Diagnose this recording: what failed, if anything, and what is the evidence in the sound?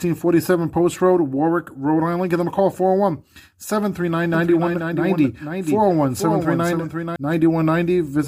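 From 4.34 s to 7.16 s the speech is heard twice: a dry, full-band copy trails about half a second behind, a few dB quieter, cutting in and out abruptly. This doubled audio track most likely comes from a slower second capture path mixed back in.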